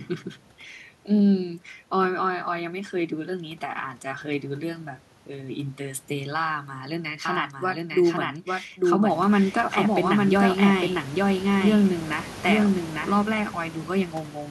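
From 7.25 s to 13.13 s the speech gets a doubled audio track: a second copy of everything runs roughly a second behind, at about the same level as the original, so the two lines talk over each other. The copy is clean and full-band, with no room tail, and it cuts in and out abruptly. It's likely a second capture path or an edit holding two copies out of step. Around 9 s the room noise also steps up noticeably.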